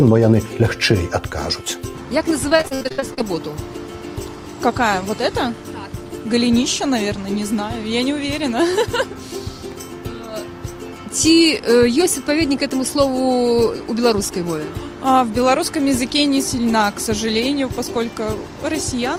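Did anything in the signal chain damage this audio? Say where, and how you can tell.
Yes. The damage happened at the network stage. From 2.49 to 3.22 s the audio turns choppy and robotic. This is repeated packet loss: about a dozen short holes follow one after another, the longest about 60 ms. The receiver patches each hole by stretching the last sound it had, which gives the robotic texture. Around 0.3 s of that stretch is filled-in sound, roughly 42 percent of it, and some other pieces are simply missing.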